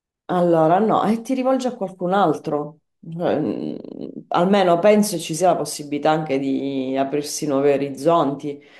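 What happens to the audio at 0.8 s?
Nothing goes wrong at 0.8 s; the speech carries on intact through that moment, with no dropout, click or distortion.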